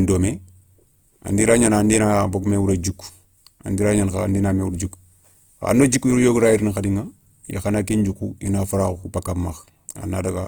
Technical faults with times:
0.00-10.48 Opus compression

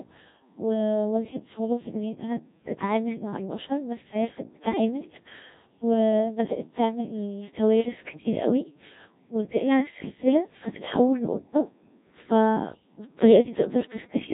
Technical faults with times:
0.00-14.33 Codec 2 vocoder

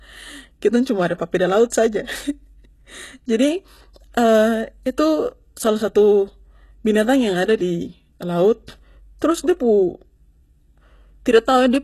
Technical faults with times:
0.00-11.83 HE-AAC compression
1.70-1.72 pre-echo

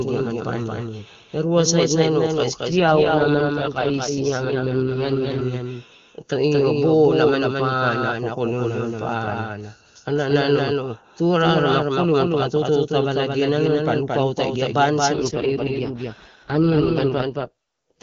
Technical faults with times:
0.00-18.02 doubled audio track
2.70-5.41 AMR rate drop
15.14-18.02 AMR rate drop

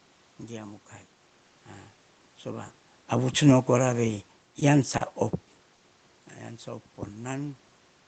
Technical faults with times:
4.59-4.63 short stall from a late packet
4.97-5.02 short stall from a late packet
5.75-5.82 short stall from a late packet

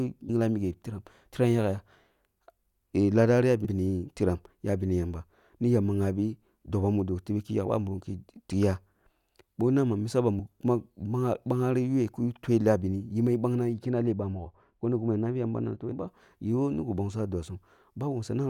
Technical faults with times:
0.28 damaged data in a compressed stream
3.65-3.67 damaged data in a compressed stream
6.64 damaged data in a compressed stream
10.38 damaged data in a compressed stream
13.74-16.08 de-emphasis applied wrongly
15.91 damaged data in a compressed stream

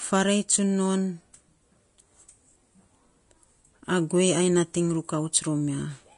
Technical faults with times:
0.00-6.17 Vorbis compression

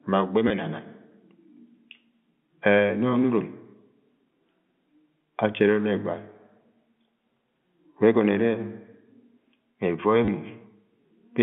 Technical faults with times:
0.48-0.50 packet loss with last packet repeated
10.25-10.28 packet loss with last packet repeated

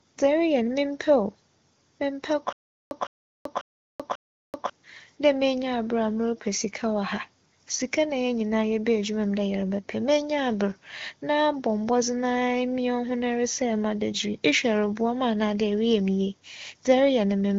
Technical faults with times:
2.53-4.70 stutter with silent gaps

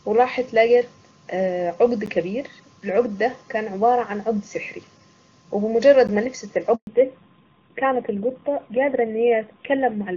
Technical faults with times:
2.06 gap between chunks
6.07 gap between chunks
6.75-6.87 handover gap
6.87-10.17 fallback to narrowband

